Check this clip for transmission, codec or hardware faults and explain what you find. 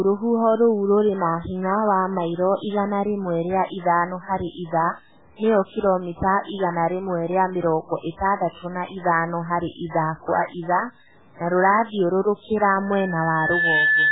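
Three faults are audible in this speech clip.

Throughout, quiet passages sound gritty and grainy, with noise about 35 dB below the speech. The likely cause is low bit depth without dither, consistent with about 8 bits truncated. On a spectrogram it appears as a broadband haze that tracks the speech.

Throughout, the speech also sounds heavily watery and swirly. It fits MP3 compression at a very low bitrate. Nothing appears above 3.8 kHz, and the spectrogram shows a hard ceiling there, with patchy, flickering blocks below it.

From 12.77 s to the end at 14.12 s, just after "kwa ithaa na rũrathiũrũrũkĩra", a loudspeaker feedback squeal swells over about a second into a 1.7 kHz tone, ending about 5 dB above the speech. The microphone is re-amplifying its own loudspeaker output. The spectrogram shows a single bright horizontal line that grows stronger over time.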